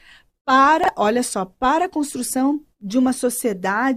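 At 0.84 to 0.88 s, before "olha só para a", chunks out of order: a 23 ms chunk plays one slot late, causing a jumbled moment without the gap a dropout leaves.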